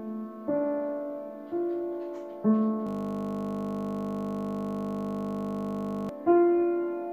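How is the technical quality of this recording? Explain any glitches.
There's one real glitch: a system hang loop running from about 2.87 s to 6.09 s. The machine or its audio driver stalled while the sound hardware kept replaying whatever sat in its ring buffer. A 20 ms slice repeats back to back, around 160 times, which points to a buffer of roughly that size. At 50 repeats a second it doesn't stutter. It fuses into a flat, steady 50 Hz buzz until the audio picks back up.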